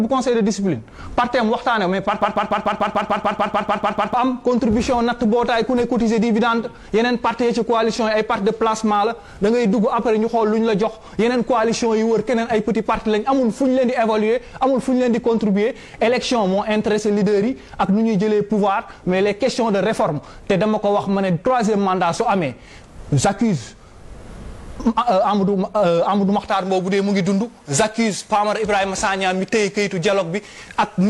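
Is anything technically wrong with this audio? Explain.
Yes. From 2.22 to 4.14 s, a 147 ms fragment repeats 13 times back to back and replaces the audio there. This is a broken-record loop, likely a stalled stream resending its last fragment.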